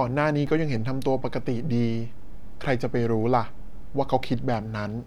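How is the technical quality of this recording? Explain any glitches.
The recording has one fault, a DC step. At 0.47 s the waveform's zero line jumps to an offset of about -29 dBFS. It holds there until 4.54 s, then returns. This happens when a converter recalibrates or an input carrying an offset is switched in. The baseline moves abruptly, so each edge is heard as a low thump or click. The speech itself carries on unchanged between the two thumps.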